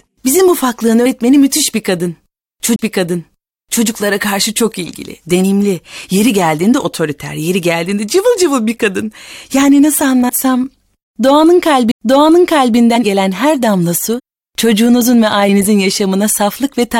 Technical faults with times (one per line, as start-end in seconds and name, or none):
1.05 compressed frames skipped
2.76-2.79 CD skip
5.43 compressed frames skipped
10.28 compressed frames skipped
11.91 CD skip
12.95 compressed frames skipped
14.18-14.20 compressed frames skipped
15.48 compressed frames skipped